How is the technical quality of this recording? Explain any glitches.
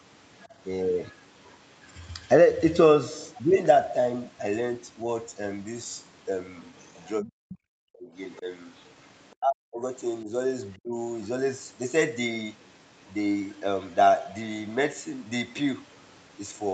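The recording has two kinds of call-processing glitch.

Other side's voice leaking through: the echo canceller likely failed to fully remove the far-end audio that the loudspeaker played back into the microphone. A faint second voice surfaces at 0.42–0.46 s, 6.63–7.55 s, 8.37–9.33 s and 12.65–13.11 s. It is clearest around 7 s, where it sits roughly 20 dB below the speech, and elsewhere it stays about 30 to 35 dB down.

Speech suppressed in double talk: when both sides spoke at once, the echo canceller likely couldn't separate the local talker from the echo and attenuated everything. Between 7.21 and 8.46 s, and again from 9.37 to 10.97 s, the speech dips very deeply in pieces, adding up to well over half a second each time.

The Opus call path limits the audio to 8 kHz, which is the normal bandwidth for this codec setting.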